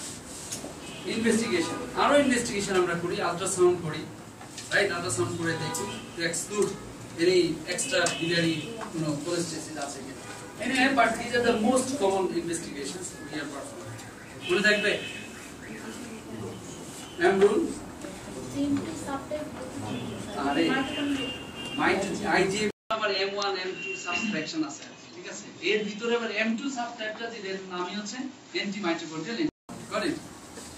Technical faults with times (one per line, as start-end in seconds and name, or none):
22.71-29.69 input switched to a poorer device